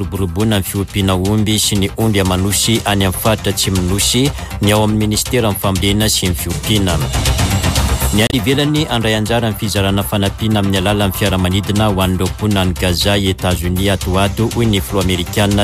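A short glitch cuts through the sound from 8.27 to 8.34 s, lasting about 70 ms, a disturbance that doesn't belong to the material around it. This is damaged data in a compressed stream: a stretch of the encoded file was corrupted, so the decoder misread the frames there, lost its place in the stream and had to hunt for the next valid frame header before decoding normally again.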